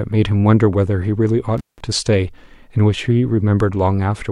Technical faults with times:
1.58-1.80 intermittent contact

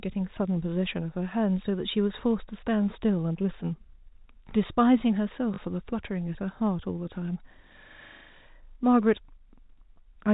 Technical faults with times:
5.54-5.58 packet loss with last packet repeated

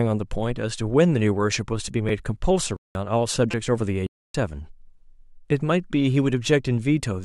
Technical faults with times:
2.09 repeated buffer
2.77-2.95 corrupt frame muted
3.51-3.54 repeated buffer
4.07-4.34 corrupt frame muted

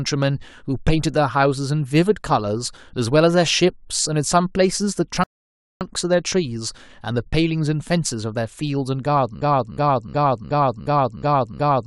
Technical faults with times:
5.24-5.81 rebuffering stall
9.42-11.86 broken-record loop

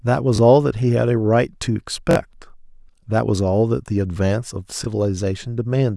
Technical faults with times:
0.36-0.38 repeated buffer
2.11-2.15 repeated buffer
4.84-4.86 repeated buffer

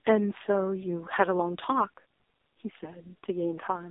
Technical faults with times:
0.00-3.90 AMR narrowband mobile codec

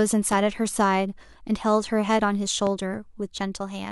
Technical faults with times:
0.32-0.36 loud pop
2.67-2.71 loud pop

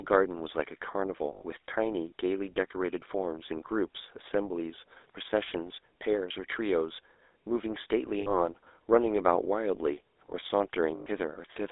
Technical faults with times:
0.00-11.71 GSM full-rate codec
1.32-1.43 lost GSM frames
8.20-8.37 lost GSM frames
10.96-11.07 lost GSM frames

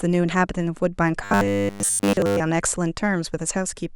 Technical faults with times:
1.24-2.40 robotic sound from repeated short buffers

